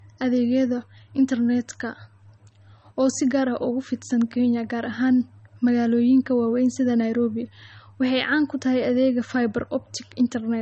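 From start to finish the speech has nothing above 8.4 kHz. It sounds dull, with smeared MP3 artefacts. This is likely low-bitrate audio saved at a high bitrate. The damage fits a 32 kbit/s source re-encoded near 320 kbit/s, which restores nothing.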